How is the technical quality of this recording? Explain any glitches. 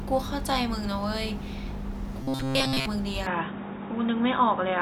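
Two glitches stand out in the later part of the speech.

From 2.23 to 2.86 s, a robotic sound from repeated short buffers gives a rigid 133 Hz buzz. Most of that stretch is likely looped 7.5 ms chunks, showing on a spectrogram as evenly spaced harmonic stripes.

From 3.27 s to the end, the input likely switched to a poorer device. The sound turns dull and band-limited, with a hard spectrogram ceiling and a faint new noise floor.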